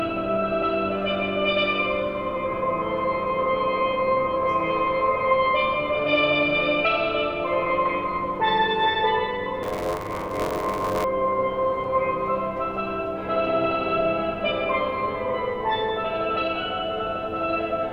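From 9.62 to 11.05 s the writing program and the playback hardware slip out of step on their shared ring buffer, causing buffer tearing. Each period now crosses the read point, so roughly a third of every buffer replays audio from one lap earlier, around 40 ms stale, spliced in with hard joins at both ends. The result is a rough, robotic buzz at 93.8 Hz, which fits a 512-sample buffer, riding on the sound throughout that stretch.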